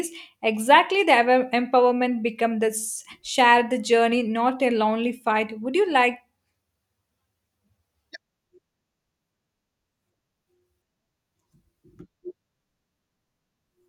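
Nothing stood out as a technical fault on listening to this speech recording.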